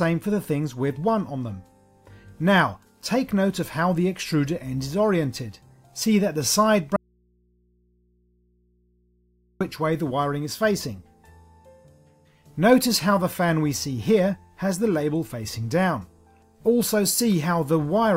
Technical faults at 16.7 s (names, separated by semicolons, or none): none